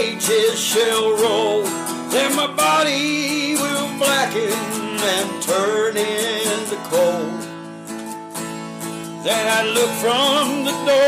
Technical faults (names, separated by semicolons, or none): none